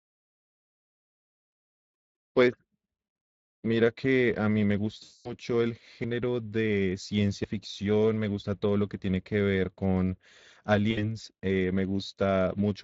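Throughout, the speech runs through the Speex codec, whose damage is plainly audible and fits a mid-range bitrate near 20 kbps. With too few bits for the excitation, the voice sounds hoarse and grainy, and the upper band is a noise-like fill.

From 5.03 to 5.37 s, VoIP packet loss concealed by the speech codec removes about 220 ms of audio. The decoder extrapolates from its last pitch and filter, so the sound smears into a fading tone or noise and stays weak briefly afterwards.

At 6.04 s the audio jumps forward by roughly a tenth of a second. At 7.44 s a similar jump skips a slightly shorter piece. The likely cause of both is a dropped buffer (overrun): samples were overwritten before being read, and the two sides were joined directly with no silence between them.

From 10.91 to 11.05 s, a second, shorter patch of concealed packet loss covers about 60 ms. The speech briefly turns into a smear before recovering.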